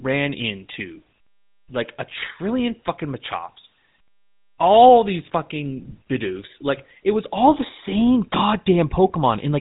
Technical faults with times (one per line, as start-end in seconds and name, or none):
0.00-9.61 GSM full-rate codec